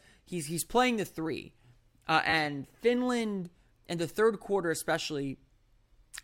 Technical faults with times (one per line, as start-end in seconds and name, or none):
0.31 repeated buffer
2.30-2.33 repeated buffer
4.15 repeated buffer